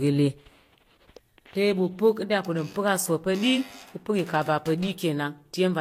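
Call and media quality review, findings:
Transcoding between lossy codecs, full clip: speech band-limited, nothing above 16.6 kHz, two distinct artefact textures layered. Likely HE-AAC then Vorbis, both near 48 kbit/s by the sound. Mixed signatures separate it from single-codec compression.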